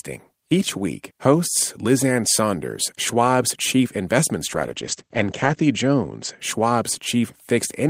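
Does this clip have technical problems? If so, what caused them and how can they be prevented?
Yes. A call bitrate drop starts at 4.49 s, just after "chief investment", and lasts until 6.45 s. The encoder's rate was cut sharply, to what sounds like roughly 12 kbps, so it coded coarsely and narrowed the audio band to about 8 kHz, leaving the sound rough and muffled, worst for about 1.1 s. This can be prevented by setting a higher minimum bitrate and keeping the connection clear of competing traffic.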